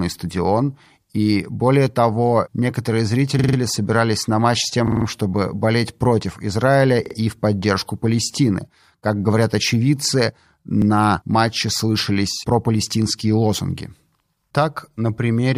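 A repeated buffer fault occurs at 3.39, 4.88, 7.06 and 10.82 s. New audio arrived late, so the device replayed its last 46 ms block, which fits a 2048-sample buffer. Each is a hard-edged stutter, with four, four, two and one extra plays.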